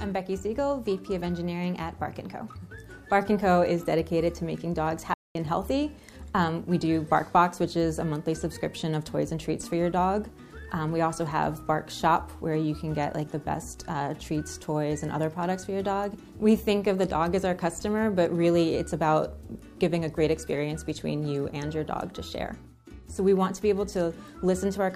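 At 5.14 s the sound cuts out abruptly and stays silent for about 0.21 s. Playback resumes at 5.35 s. This is a playback stall. The likely cause is that the player's buffer ran dry or its output thread was held up, so nothing reached the output for that stretch. On a waveform it shows as a flat, near-silent line dropping in abruptly and jumping back. On a spectrogram it is a clean vertical blank band across all frequencies.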